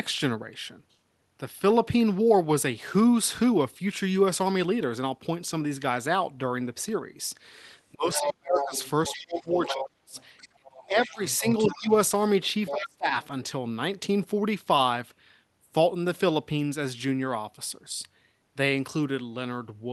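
From 7.93 to 8.74 s, speech is suppressed in double talk: the echo canceller, likely unable to tell the talker from its own loudspeaker echo while both sides speak, pulls the speech down by around 40 dB. The same thing happens again from 9.14 to 10.16 s (about 30 dB), from 10.54 to 11.9 s (about 25 dB) and from 12.71 to 13.14 s (about 30 dB), each time making the speech dip or drop out in pieces.

Overlapping these drops, the other side's voice leaks through, likely because loudspeaker echo was not fully cancelled. From 8.13 to 11.79 s it sits roughly 10 dB below the speech. It comes back briefly from 12.67 to 12.86 s at a similar level, then as a very faint scrap, about 35 dB down, at 13.23 to 13.27 s.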